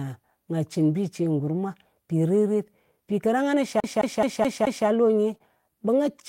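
From 1.23 to 1.25 s the speech turns briefly rougher and noisier without any gap, a lost packet rebuilt from error correction. About 20 ms, which fits one lost packet, was replaced by the low-bitrate backup copy carried in the following packet.

Between 3.80 and 4.87 s a fast, even stutter sets in: the same 213 ms slice of speech repeats five times, with a short mute at each jump. This is a CD stuck on one turn, where a scratch sends the laser back one track at the same spot on every rotation.

A second rebuilt packet follows from 5.34 to 5.36 s, again a 20 ms stretch that sounds grainier than its surroundings because it was decoded from the backup copy.

Right after, from 5.38 to 5.42 s, there is a brief smear where about 20 ms of audio went missing: a short concealed packet loss. The decoder extended the preceding sound to cover the hole, then blended back into the real signal.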